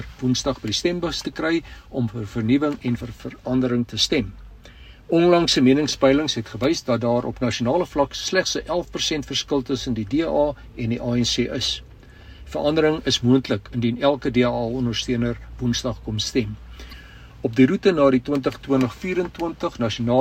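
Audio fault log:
2.97–3.01 s, 7.51 s and 16.91–16.94 s: damaged data in a compressed stream. Each is a brief chirp or blip breaking into the sound. The bursts last about 40 ms, under 20 ms, and about 30 ms. At these points the compressed bytes are wrong. The decoder misreads those frames and loses sync. It then hunts for the next valid frame header. The garbled frames come out as short bursts.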